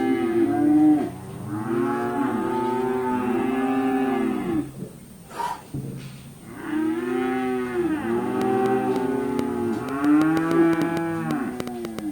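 From 2.03 to 8.07 s a call bitrate drop makes the sound rough and muffled, consistent with the encoder falling from about 96 to 19 kbps for roughly three seconds. On a spectrogram the upper band thins out and blurs.

From 8.42 s to the end, a train of clicks ticks irregularly at about 4.8 per second, well above the sound and likely from electrical interference. These show as sharp waveform spikes and thin full-height spectrogram lines.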